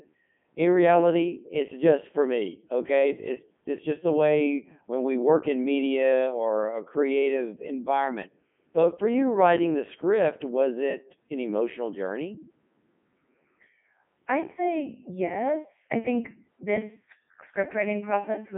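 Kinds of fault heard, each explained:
Codec 2 vocoder: The speech sounds robotic and buzzy and heavily damaged throughout. It is confined to 150 Hz to 3.5 kHz, with nothing above 3.6 kHz. The decoder rebuilds the voice from sine waves using only pitch, voicing, energy and spectral envelope, which fits its 3.2 kbit/s mode.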